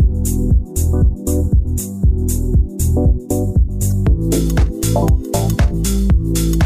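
Damaged data in the compressed stream from 3.88 to 3.91 s makes the decoder misread frames and resync, heard as a brief chirp, click or gap.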